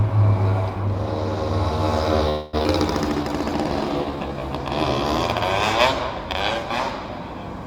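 At 2.29 s the sound halts and is stretched into a fading continuation until 2.55 s. This call audio freeze likely comes from delayed packets draining the jitter buffer. Nothing is lost.

At 2.63 s there is a skip ahead. Roughly 150 ms of sound is dropped, and the two sides are joined in about 15 ms by 2.67 s.

From 3.23 to 4.35 s, a jitter buffer slow-down plays the sound at 89% speed, with unchanged pitch. Repeated short segments add 137 ms, giving a drawn-out feel.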